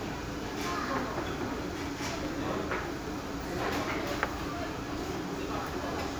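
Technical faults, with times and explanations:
2.25 s and 3.26 s, loud pop: Two single sharp pops sit on top of the sound, which carries on underneath. The first peaks roughly 10 dB above the sound, the second roughly 5 dB. Each is likely a brief voltage pulse from a switch, plug or static.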